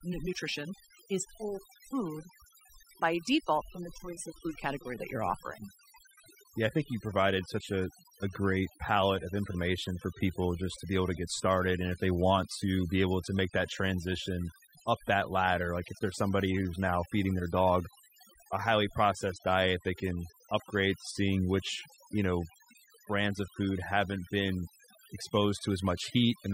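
A speech recording where the gaps between phrases fall to an unnatural near-silence flecked with small twinkling, chirping specks, with the quieter edges of syllables seeming to dissolve. This is overdone noise removal, present from start to finish: a noise reduction stage set far too aggressively on a noisy source, pulling individual frequency bands down or shutting them off whenever they sat close to its noise estimate, so faint parts of the voice were stripped away along with the noise.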